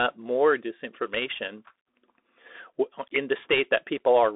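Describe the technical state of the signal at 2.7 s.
At 2.7 s you're hearing the Bluetooth CVSD headset codec, which runs through the whole clip. CVSD just sends a single up-or-down bit per sample and keeps adjusting its step size, and what's audible fits a 64 kbps stream. The band is squeezed to roughly 300 Hz to 3.6 kHz, so the speech sounds thin and boxy. The damage is plainly audible: loud, bright bits overshoot the step and distort, s sounds get scratchy, and a grainy hiss sits underneath.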